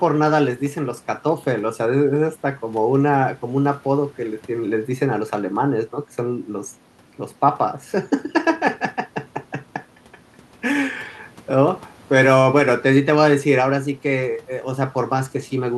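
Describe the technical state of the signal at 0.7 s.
At 0.7 s the speech signal is intact, with no dropout, distortion or other fault present.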